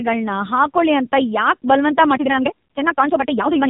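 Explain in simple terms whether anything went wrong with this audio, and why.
Two things went wrong. The whole clip went through the AMR narrowband mobile codec, squeezed hard, so nothing above 3.8 kHz survives and the voice sounds buzzy and synthetic, like an old phone call. From 2.09 s to the end, the speech suddenly runs 1.92 times faster at the same pitch, sounding rushed. That's likely a time-stretched section.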